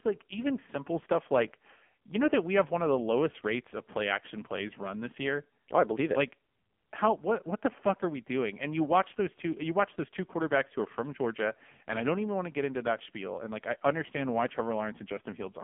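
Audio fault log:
Throughout: AMR narrowband mobile codec. The speech is squeezed into a telephone band of roughly 200 Hz to 3.4 kHz, with nothing audible above 3.5 kHz, so sibilants and consonant detail are gone and the low end is thin. Damage is heavy: the voice sounds buzzy and synthetic, as a vocal-tract model driven by sparse pulses replaces the real waveform, which fits AMR-NB at its 5.9 kbps mode, where few bits per 20 ms frame remain for detail.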